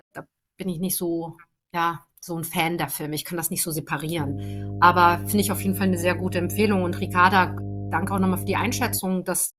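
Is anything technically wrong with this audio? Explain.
Yes. From 4.17 s, just after "kann das nicht so", a steady low drone at 50 Hz with some low harmonics sits under the speech until 9.0 s. It is fairly prominent, roughly ten decibels below the speech, so it stays audible even through the talking. This is mains hum: a ground loop or a nearby transformer let the 50 Hz power line leak into the signal path.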